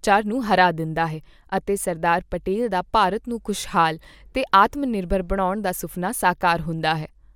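No audible technical faults turn up anywhere in this speech recording.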